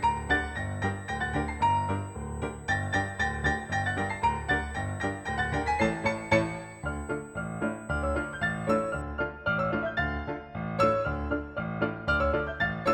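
From the start until about 9.0 s there's a steady USB whine sitting at 8 kHz, roughly 30 dB under the sound. That pitch matches the 125-microsecond microframe rate, so the bus's pulsing current draw is leaking into the audio through power or ground.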